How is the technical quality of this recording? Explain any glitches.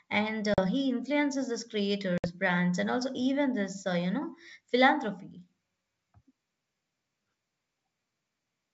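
The recording has two dropouts from packet loss on an ADPCM call, heard through wideband G.722 coding that sounds consistent with 64 kbit/s. The first hole runs from 0.54 to 0.68 s, just before "he influences these". The second runs from 2.18 to 2.28 s, between "he influences these" and "brands and also even". Each is a hard-edged gap of silence, about 40 ms and 60 ms long, which points to two or three lost packets. Afterwards the decoder's predictor and step size no longer match the sender's, so the speech resumes slightly distorted before settling.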